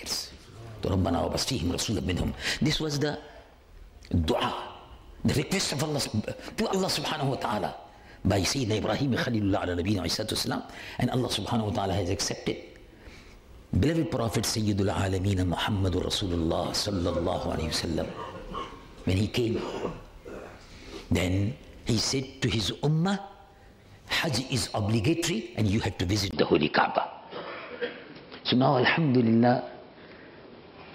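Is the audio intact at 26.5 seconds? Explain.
No. From 26.31 s to the end, after a 20 ms gap, it turns dull and boxy, cut off above 5.4 kHz, with a level shift of about 5 dB and new faint background noise. That's likely an input switched to a poorer device.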